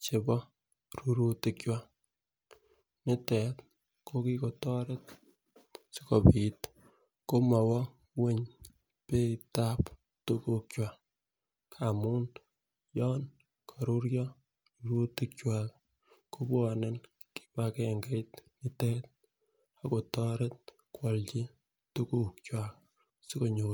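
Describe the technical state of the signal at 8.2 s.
At 8.2 s the speech signal is intact, with no fault audible at that moment.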